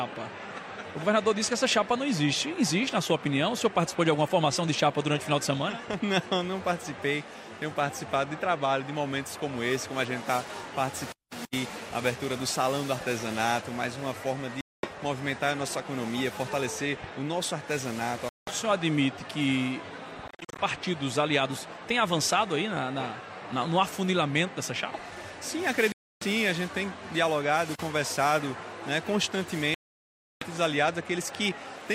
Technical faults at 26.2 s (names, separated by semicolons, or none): Bluetooth dropout